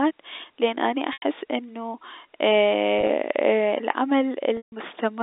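Telephone speech, band-limited to roughly 250 Hz to 3.7 kHz by G.711 coding. Packet loss with pitch repetition occurs at 1.13 to 1.22 s, 2.99 to 3.09 s, and 4.57 to 4.72 s. Repeated pitch periods bridge the short gaps, giving a held, buzzy sound. The longest gap, 150 ms, fades toward silence.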